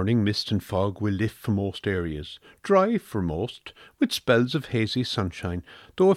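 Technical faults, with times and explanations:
Nothing in this speech recording stands out as a technical fault. There are no events to time or explain.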